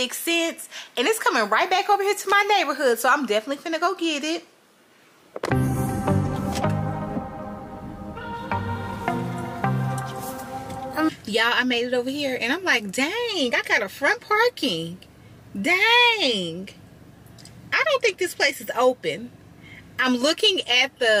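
From 1.41 to 2.91 s, the audio shows low bit depth with noise shaping. The signal is stored with too few levels, which fits a 9-bit path. Each sample is rounded coarsely. That rounding error is fed back and pushed toward high frequencies. The result is a steady, thin hiss. It sits roughly 30 dB below the signal. It grows much stronger toward the top of the band. It stops when the passage ends.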